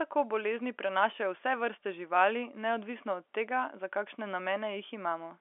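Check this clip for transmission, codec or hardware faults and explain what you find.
Nothing here counts as a fault to my ear; the audio just has the narrow band you'd expect from G.711 telephone coding, roughly 300 Hz to 3.4 kHz with nothing above about 3.7 kHz, which is how that line is meant to sound.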